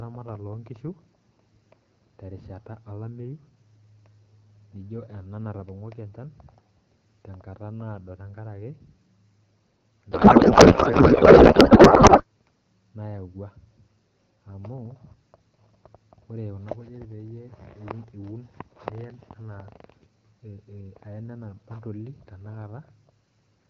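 Speech carried over wideband AMR, with light codec colouring consistent with a mid rate around 12.65 kbit/s, hits a codec payload misread from 10.11 to 12.25 s. The speech turns to garbled noise and warble that barely tracks it, which points to octet-aligned frames being unpacked as bandwidth-efficient. Unlike packet loss, there is no silence or smoothed repetition, and it ends abruptly once the packing agrees again.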